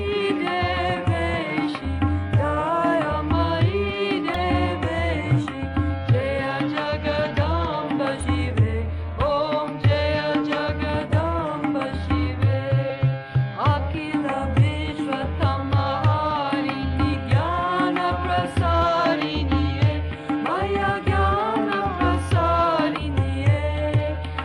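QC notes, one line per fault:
1.77–1.83 s, 4.32–4.41 s, 8.20–8.24 s, 9.17 s, 14.86–15.00 s, 22.97–22.99 s: compressed frames skipped. At each point the decoder drops whole frames, so the sound jumps forward by roughly 20 ms (1.77, 9.17 s), around 100 ms (4.32 s) or roughly 70 ms (8.20, 14.86, 22.97 s). In the waveform the envelope steps abruptly with no silent gap.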